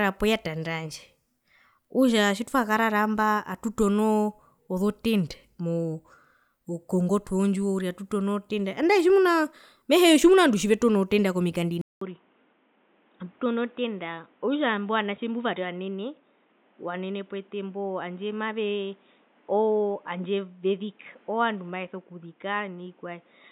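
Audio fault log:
11.81 to 23.51 s, input switched to a poorer device: after a 200 ms silence the speech turns dull and boxy, likely because a narrower-band microphone took over. The spectrogram stops hard at 3.8 kHz above a new noise floor roughly 35 dB down, and the waveform shrinks about 5 dB.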